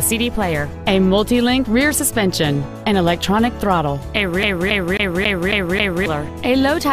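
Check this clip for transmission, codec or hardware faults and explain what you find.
One playback fault is present. From 4.43 to 6.06 s, the CD is stuck on one turn: a scratch throws the laser back a track, so a 272 ms segment repeats six times, each with a brief mute, in an even stutter.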